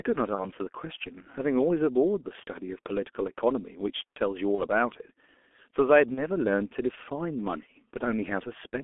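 Throughout, the speech passes through a G.723.1 codec at a rate that fits 6.3 kbit/s, confined to 250 Hz–3.4 kHz, leaving it heavily muffled and hoarse with smeared consonants. VoIP packet loss, concealed by the speech codec, occurs at 0.35–0.49 s, 4.55–4.60 s and 6.14–6.23 s. Each fits a single lost 30 ms frame, and the decoder's extrapolation produces a brief, fading smear.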